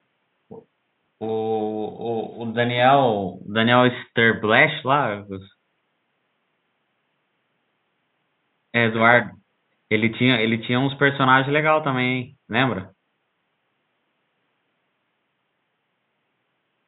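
No technical faults can be heard anywhere here.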